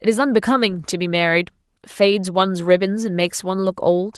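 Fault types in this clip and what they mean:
No technical faults can be heard in this speech.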